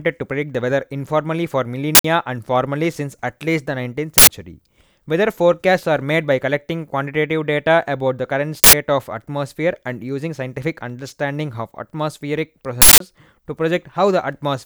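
Uninitialised buffer bursts hit the speech at 1.95, 4.18 and 8.64 s (each 93 ms, fitting a 4096-sample buffer) and 12.82 s (186 ms): loud digital noise from leftover memory, not silent dropouts.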